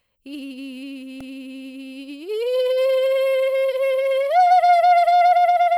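At 1.20 s the music has a repeated buffer. New audio arrived late, so the device played the last block, about 1.45 ms long and consistent with a 64-sample buffer, twice more. The hard joins give a brief buzzy click, and roughly 3 ms of audio is lost.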